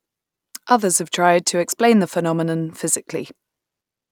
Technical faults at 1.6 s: none

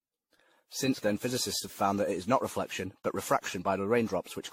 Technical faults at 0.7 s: generation loss

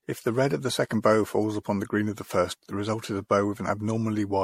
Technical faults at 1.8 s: generation loss

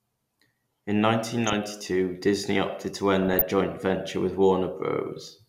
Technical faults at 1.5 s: DAB burbling

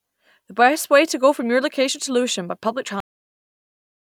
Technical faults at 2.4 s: none

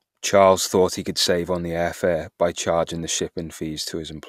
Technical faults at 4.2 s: none

